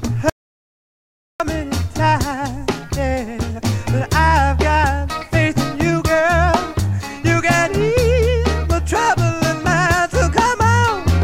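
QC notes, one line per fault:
0.30–1.40 s: audio dropout to silence, about 1.1 s of silence with no room tone, likely from the input dropping while recording continued.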